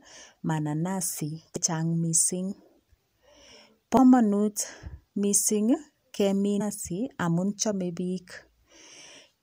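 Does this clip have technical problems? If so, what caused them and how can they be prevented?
Yes. Three brief bursts of damaged data in a compressed stream occur at 1.56 s, 3.97 s and 6.60 s, the last just after "mising kemin". At each point a corrupted stretch of the encoded speech makes the decoder misread a frame and lose sync until it finds the next valid frame header, producing a short chirp or blip. Verifying file integrity with checksums and using error-protected transport prevents it.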